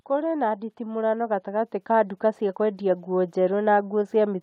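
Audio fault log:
0.07–4.38 s, automatic gain rising: the gain control judged the input too quiet and lifted its gain gradually across the whole span, by about 13 dB. Speech and background noise therefore swell together, with no sudden step anywhere.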